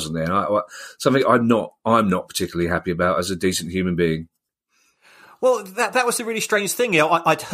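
Nothing is technically wrong with this speech clip; no faults can be heard at any point, so there are no times or causes to report.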